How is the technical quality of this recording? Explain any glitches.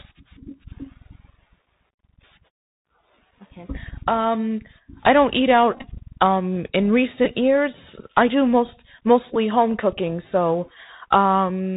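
The recording has clear technical problems. It went through a narrowband Bluetooth headset link, and that link dropped packets in three places.

The Bluetooth CVSD headset codec runs throughout. It sends one up-or-down bit per sample at 64 kHz, which fits a 64 kbps stream, and its step size adapts as it goes. Nothing above 4 kHz survives, so the speech sounds muffled and boxy. Loud, bright moments outrun the step size and distort, s sounds come out scratchy, and a grainy hiss sits under everything.

There are three Bluetooth headset packet repeats. In each one, headset packets were lost and the chip decoded the previous packet's bits again in their place.

The first runs from 5.73 to 5.86 s, just after "I don't eat". About 64 ms of audio is lost, scattered over 112.5 ms, which suggests around 17 packets. The repeated stretches, the longest around 20 ms, cycle every 3.75 ms and produce a brief buzz near 267 Hz.

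The other two are much shorter. One comes at 7.25 s, just before "years I do most". The other comes at 9.35 s, between "years I do most" and "home cooking so". Each loses about 11 ms, consistent with three packets.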